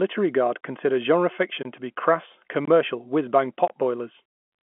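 At 0.61–0.63, 1.63–1.65, 2.65–2.68 and 3.68–3.70 s, the speech drops out for about 23 ms. This is a gap between chunks. Silence is left at each join of one-second chunks, leaving short holes at a steady rhythm. The speech itself stays narrow and telephone-like, as G.711 coding would give.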